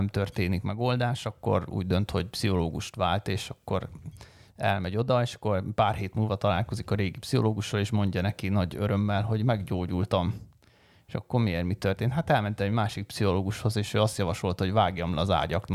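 No technical faults are audible.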